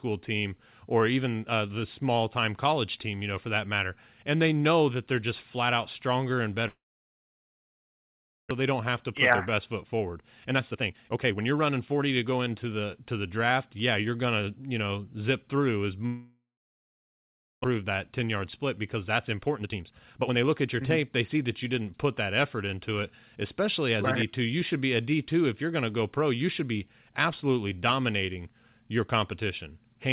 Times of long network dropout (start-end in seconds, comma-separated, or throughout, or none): 6.68-8.61, 16.06-17.66